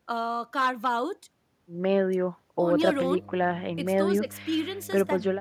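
From 2.71 s to the end, a steady low drone sits under the speech, pitched at 50 Hz and fairly prominent, roughly 15 dB below the talker. This is mains hum: the 50 Hz power supply is leaking into the signal path, most commonly through a ground loop between connected equipment or from a transformer close to the cabling, so the line frequency rides along with the recording.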